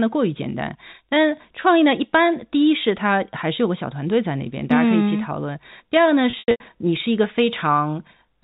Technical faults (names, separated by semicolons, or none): packet loss with pitch repetition